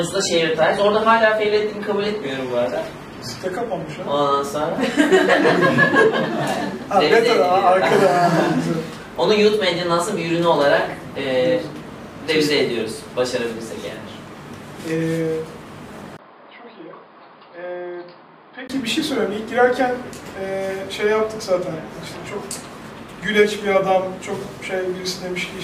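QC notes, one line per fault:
0 to 4.0 s, adaptive stream starting at a low bitrate: the top end is thin and swirly, with stronger codec smearing, then it snaps to full quality with no gap. That fits the player opening on a lean AAC rendition near 24 kbit/s before stepping up to something like 96 kbit/s.
16.17 to 18.70 s, input switched to a poorer device: after a 20 ms dropout the sound goes dull and boxy, with nothing above 5 kHz, about 10 dB quieter, and a new noise floor roughly 45 dB down. That's likely the recording jumping to a cheaper mic or headset profile.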